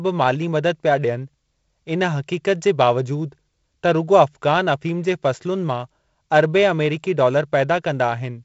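No technical faults can be heard in this speech. It carries G.722 wideband telephone coding: the sound stops at about 7.7 kHz, and there is a light hiss in the upper band plus a slightly noisier lower band, which fits the 48 kbit/s mode.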